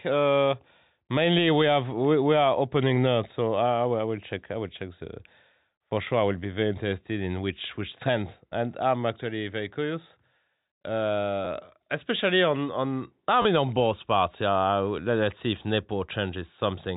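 A speech clip carried over G.711 telephone coding, so nothing above 4 kHz is present, with two instances of packet loss with the last packet repeated. At 11.45 s, just before "especially on on I", about 10 ms of audio was lost and filled by replaying the previous chunk, which comes across as a small blip. From 13.42 to 13.45 s, between "especially on on I" and "mean on both parts", a 30 ms gap was filled the same way, giving a brief robotic stutter. That length fits three 10 ms packets repeated back to back, which would set a 100 Hz repetition rate. On a waveform, the repeated stretches show as copies of the preceding packet, with a possible jump where each copy joins. On a spectrogram, they appear as identical vertical slices set side by side where the harmonic pattern stops evolving.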